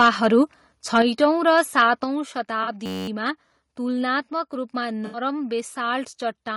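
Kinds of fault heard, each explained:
Low-delay AAC compression: Throughout, the speech sounds rough and grainy, with noise between harmonics, likely from AAC-ELD's short frames at a low bitrate, roughly 32 kbps.
Microphone overload: At 0.00–0.26, 0.96–1.25 and 1.57–1.81 s, peaks go about 4, 1 and 3 dB over full scale and are flattened, likely by excessive input gain, adding harsh crackle.
Microphone volume stepped down: At 1.02 and 2.04 s, speech and background drop abruptly by about 5 dB each, likely the call software cutting the input gain after distorted peaks.
AAC frame loss with concealment: At 2.63–2.69 s (40 ms) and 5.06–5.19 s (80 ms), smeared, noisy patches replace missing audio as the decoder fills gaps from earlier spectra.
System hang loop: From 2.86 to 3.08 s, a 10.67 ms slice repeats about twenty times, buzzing at 93.8 Hz, which fits a frozen system cycling a 512-sample buffer.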